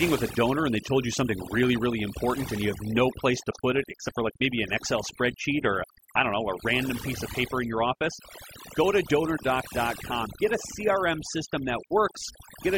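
From start to finish the speech carries a case of overdone noise removal. The denoiser was clearly pushed too hard: any frequency band sitting close to what it took for noise gets pulled way down or shut off, and the softer parts of the voice get caught in that too. So the background drops away and breaks up into little twinkly, warbling specks.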